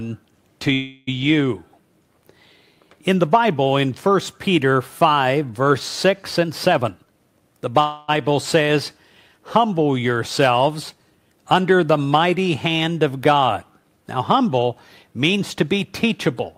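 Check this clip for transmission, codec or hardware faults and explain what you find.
There are two kinds of fault here, each showing up twice.

Call audio freeze, 0.73 to 1.09 s and 7.81 to 8.10 s: the sound stalls and the last bit smears into a fading buzz for about 338 ms and 275 ms. Likely delayed packets emptied the jitter buffer. Afterwards it resumes where it stopped, so nothing's lost, just a gap inserted.

Jitter buffer speed-up, 6.43 to 7.78 s and 15.33 to 16.32 s: the sound rushes at 119% and then 114% speed with pitch unchanged. The buffer had backed up, so the receiver snipped out pitch-period slivers, roughly 0.3 s and 0.15 s in total, to trim the delay.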